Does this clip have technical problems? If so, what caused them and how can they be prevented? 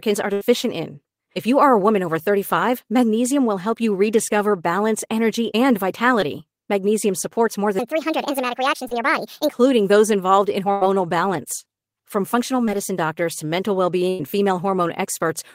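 Yes. There are four kinds of fault, all in a speech clip.

A burst of packet loss hits at 0.33 to 0.43 s, and again at 10.71 to 10.83 s, just after "those involved in". About 80 ms and then 100 ms of audio went missing. The receiver stretched the last sound into a fading buzz or hiss before the speech jumps ahead. That one continuous gap, rather than several small ones, is what sets it apart. A larger jitter buffer and forward error correction would prevent it.

A section at the wrong speed runs from 7.79 to 9.53 s, between "supports more" and "those involved in". It plays 1.45 times too fast and sounds about seven semitones higher. Pitch and tempo rise together, unlike a pitch-shift, so it was likely caused by a clock or sample-rate mismatch. Matching sample rates throughout the chain prevents it.

A short concealed packet loss falls at 8.88 to 8.93 s, inside the sped-up stretch. About 40 ms is missing, patched into a brief smear. 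It is one small blip, much shorter than a burst. Forward error correction or redundancy would prevent it.

Scattered short gaps appear from 12.65 to 14.30 s. Around three separate holes, about 120 ms in total, each leave a tick or hiccup. These are spread out rather than joined into one dropout. A steadier network path and an adaptive jitter buffer would prevent them.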